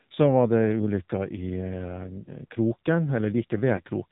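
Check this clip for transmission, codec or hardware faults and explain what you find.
Two faults are audible: narrowband mobile coding throughout and two brief frame losses.

AMR narrowband mobile codec, whole clip: speech is cut off above 4 kHz and sounds buzzy and synthetic. The damage is plainly audible, which fits a low mode near 7.4 kbps.

Lost AMR speech frames at 2.24 to 2.31 s and 3.76 to 3.81 s: the decoder repeats the previous settings at falling gain. Each gap gives a short dip or warble, which fits a single lost 20 ms frame.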